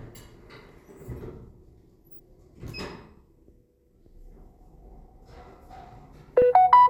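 Damaged data in a compressed stream shows up twice, at 0.69 s and again at 6.42 s. At each point a stretch of the encoded stream was corrupted, so the decoder misread the affected frames, lost sync and had to hunt for the next valid frame header before output resumed. Each event is heard as a brief chirp or blip cutting across the sound, the second one shorter than the first.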